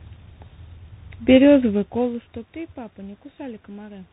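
The call has passed through tandem speech coding: the audio was decoded and re-encoded at each link border, so each coder worked on the already degraded output of the one before, a pattern that fits three speech codecs in a row with CVSD among them. Throughout this speech clip the sound is rough and noisy, with nothing above about 3.8 kHz. The room's background noise and the level change near a second and a half, as the talker shifts position, are part of the recording.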